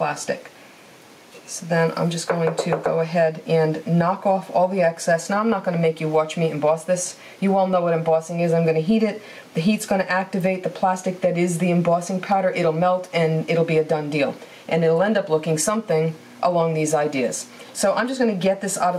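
Gain pumping runs through the whole clip: the gain swings by around 10 dB under loud sounds, likely from excessive input gain driving a fast limiter.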